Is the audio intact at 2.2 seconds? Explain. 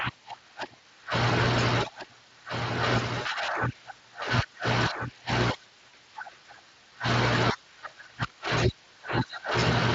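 No. A doubled audio track spans 1.40 to 5.30 s. A copy about 5 dB quieter trails roughly 1.5 s behind, likely from a slower capture path.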